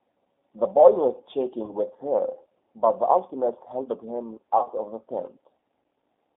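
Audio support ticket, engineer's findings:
G.729 codec, whole clip: band held to about 250 Hz to 3.6 kHz, rough synthetic speech texture at 8 kbit/s. Pulse-coded roughness, not simple low-pass filtering.

VoIP packet loss concealed by the speech codec, 1.65 to 1.75 s and 4.58 to 4.69 s: fading extrapolated tone or coloured noise, not silence or clicks. Gaps fit roughly 30 ms and 60 ms of lost frames. The second is scattered.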